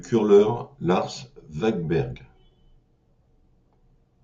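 Throughout the speech, a resampler restarted on every block leaves a 100 Hz buzz, which fits a 44.1 kHz to 48 kHz conversion handled in 10 ms blocks with small errors at each block edge. Unlike mains hum, it vanishes in pauses.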